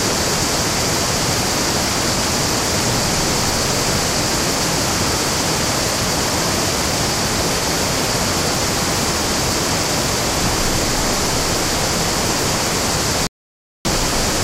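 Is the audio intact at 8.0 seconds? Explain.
Yes, at 8.0 s the sound plays through without any dropout, click, glitch or other fault.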